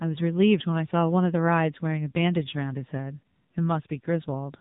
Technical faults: AMR narrowband mobile codec

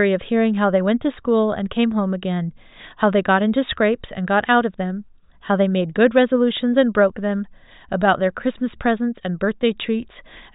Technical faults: none

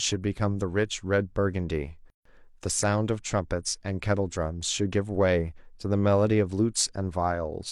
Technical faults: gap at a join of encoded pieces

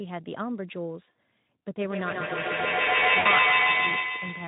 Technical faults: VoIP packet loss concealed by the speech codec; feedback howl

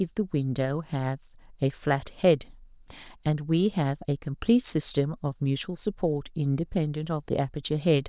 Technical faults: none

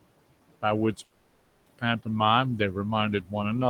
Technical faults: noise suppressor artifacts; call audio freeze; speech cut by the noise suppressor

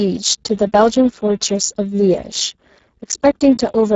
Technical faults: Speex codec

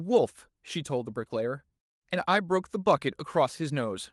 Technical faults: none

